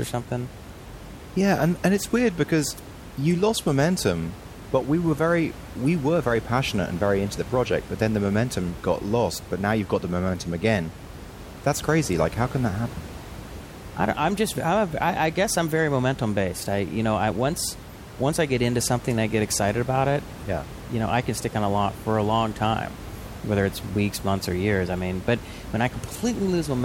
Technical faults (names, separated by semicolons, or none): none